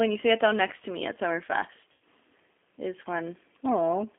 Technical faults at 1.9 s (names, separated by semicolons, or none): G.729 codec; VoIP packet loss concealed by the speech codec